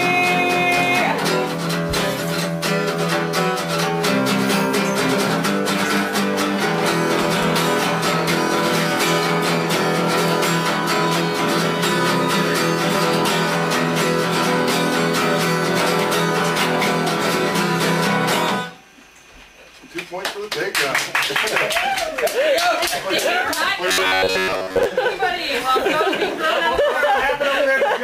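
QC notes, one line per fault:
23.88–24.85 s: robotic sound from repeated short buffers. For about a second the sound turns into a rigid metallic buzz at 93.8 Hz. It's likely audio arriving too slowly, so the last chunk, about 10.7 ms, gets looped in place of most of the real signal.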